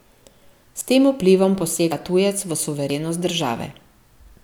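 Three small forward jumps in the speech sit at 0.81 s, just before "tem vplivom", at 1.92 s, before "tujec v", and at 2.90 s, just after "tujec v". Each skips about 40 ms, likely a dropped buffer (overrun) where unread samples were overwritten.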